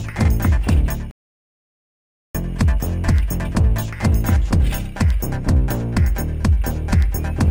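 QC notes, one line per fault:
1.11 to 2.35 s, playback stall: the sound cuts off mid-flow and there's dead silence for 1.24 s before it picks up again. Likely the player ran out of data or its thread got blocked, so output went quiet until it recovered.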